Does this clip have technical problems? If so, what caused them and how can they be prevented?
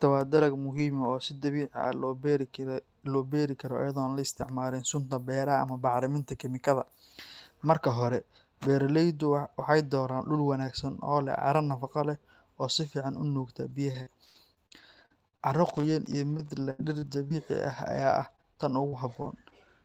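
Yes. Repeated packet loss (robotic sound) occurs from 13.61 to 17.32 s, just after "si fiican u nuugta". There were fourteen gaps, the longest 101 ms, and the decoder papered over each by extending the previous sound. Roughly half a second of the sound is patched this way, making it choppy and robotic. A second stretch from 18.20 to 19.50 s has 5 gaps, the longest 42 ms. Preventing this means fixing the congested or unstable network path and giving the jitter buffer enough depth to absorb late packets.

A lost packet rebuilt from error correction appears at 17.70–17.72 s. One 20 ms packet was lost, and the following packet's low-bitrate backup copy filled it, so there is no gap but a brief rougher, noisier patch. Keeping forward error correction enabled while reducing network loss keeps such repairs rare.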